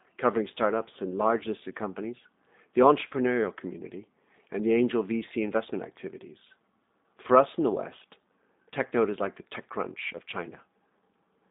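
The whole clip has plainly audible G.729 codec damage: speech confined to 200 Hz–3.7 kHz, rebuilt from sparse pulses, sounding rough and synthetic, as an 8 kbit/s stream would.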